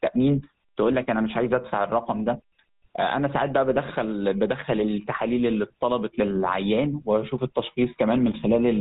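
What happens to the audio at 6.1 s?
At 6.1 s, as across the whole recording, the speech carries GSM full-rate codec damage: nothing above 4 kHz survives, and a pulse-driven vocal-tract model leaves a plainly buzzy, gravelly roughness consistent with 13 kbps coding.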